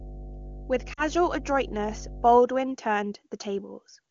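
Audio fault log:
0.00–2.36 s, mains hum: a steady 50 Hz tone with low harmonics sits about 15 dB below the speech, pointing to a ground loop or nearby transformer.
0.93–1.03 s, lost AMR speech frames: 40 ms of sound smears and dips in level, consistent with two dropped 20 ms frames concealed by repeating prior parameters with decaying gain.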